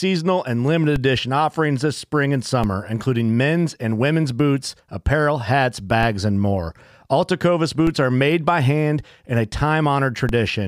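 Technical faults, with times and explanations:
0.96, 2.64, 6.03, 7.87 and 10.29 s: DC steps. The waveform's zero line jumps abruptly, heard as a low thump each time, for example between "offerings this spring and" and "including men's and women's". The offset then drains away as if through a 20 Hz high-pass, while the speech continues unchanged.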